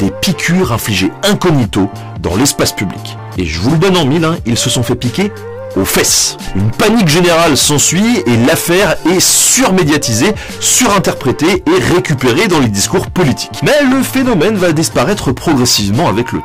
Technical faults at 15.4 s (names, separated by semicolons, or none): hard clipping